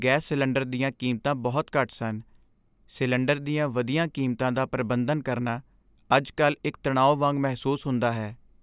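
Nothing stood out on listening to this speech recording.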